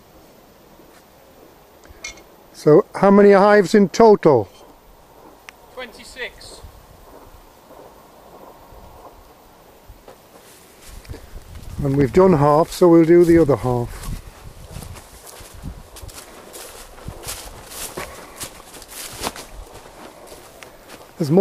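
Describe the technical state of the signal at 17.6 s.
Nothing is wrong with the signal at 17.6 s; the audio there is intact.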